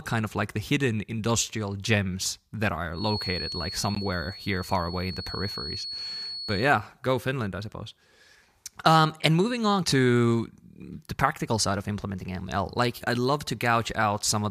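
From 2.9 to 6.75 s a thin, steady feedback whistle at 4.4 kHz sits about 10 dB under the speech, likely from a loudspeaker-to-microphone loop held at the point of feedback. On a spectrogram it is a flat horizontal line. At 3.95 s and 5.99 s, gaps between stream segments cut silent holes of 15.7 ms and 4.8 ms into the audio, spaced about 2 s apart to match the segment length. In the waveform they appear as hard-edged flat dropouts, and on a spectrogram as thin vertical blank strips.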